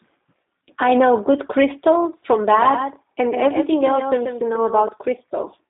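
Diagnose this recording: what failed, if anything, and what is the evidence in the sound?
Codec stage. The G.729 codec shapes the whole clip. The speech sits in a narrow line band from 200 Hz to 3.7 kHz, with nothing above 3.8 kHz. Its timbre is rough and synthetic, which fits an 8 kbit/s G.729A encoder rebuilding each frame from a filter and sparse pulses.

Call processing stage. A doubled audio track appears from 2.52 to 4.88 s. A full-band copy trails roughly 150 ms behind, about 5 dB quieter, with no room colour. It starts and stops abruptly. The likely cause is a second, slower capture path mixed in.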